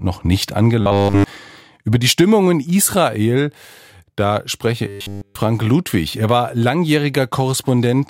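From 0.81 to 1.24 s, and again from 4.87 to 5.35 s, the speech turns into a rigid, metallic 100 Hz buzz. This is robotic sound from repeated short buffers. A 10 ms chunk was likely looped throughout, skipping the real audio in between.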